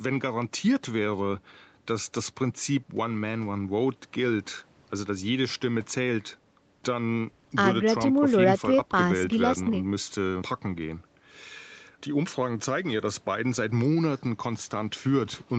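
No faults heard in this speech; the top end stops at about 8 kHz and the lowest bass is gone, as expected from call microphone processing and a WebRTC call path whose coding noise fits Opus at around 32 kbps.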